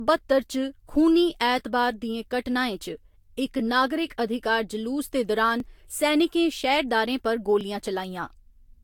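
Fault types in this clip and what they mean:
Generation loss: swirly, hollow, smeared sound with blurred onsets, likely from several rounds of lossy re-encoding; the spectrogram shows patchy holes and nothing above 19 kHz.
Overlapping chunks: a 7 ms piece replays at each 2 s join, clicking at 1.59, 3.59, 5.60 and 7.61 s; the waveform shows a brief duplicated, discontinuous segment there.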